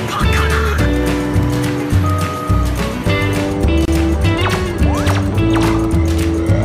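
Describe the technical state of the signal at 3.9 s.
At 3.85 to 3.88 s the sound drops out for about 26 ms, a brief hole with softened edges, then resumes where it left off. This is a gap at a join of encoded pieces: separately encoded segments were butted together with their encoder start delay and final-frame padding left untrimmed.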